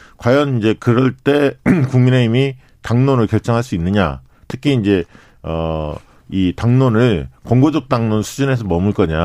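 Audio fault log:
4.50–4.52 s loud pop. A single sharp pop rises a few dB above the speech, which continues underneath. Likely a brief voltage pulse entering the signal chain.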